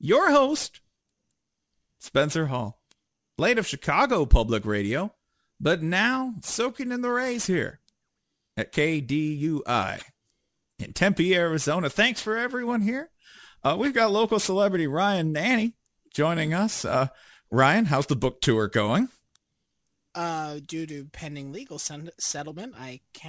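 Aliasing runs through the whole speech clip. The rate appears to have dropped to about 16 kHz without an anti-alias filter, so content above 8 kHz folds back down, roughly 20 dB under the signal, giving sibilants a gritty, metallic edge. Simple band-limiting would sound dull instead.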